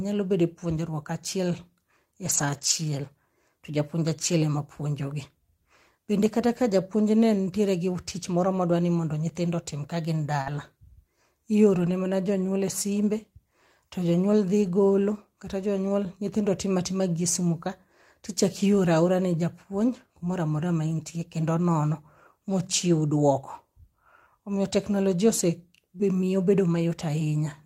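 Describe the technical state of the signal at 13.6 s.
At 13.6 s the audio is intact, with no audible technical fault at that moment.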